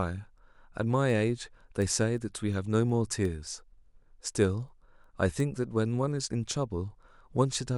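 Two digital devices are running on separate, unlocked clocks, about 70 ppm apart, so a single sample is dropped or repeated each time they slip. Word clock ticks result: sharp clicks of uneven strength roughly every 0.4 s, about twenty of them, from 0.39 s to 7.55 s through the speech.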